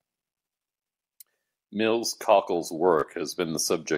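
Bluetooth stutter at 3.00 to 3.03 s: 29 ms was lost, so the receiver replayed its last slice as a brief buzz, then skipped ahead.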